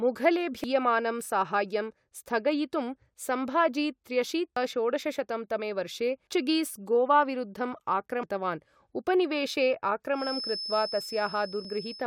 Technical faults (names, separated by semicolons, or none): damaged data in a compressed stream; feedback whistle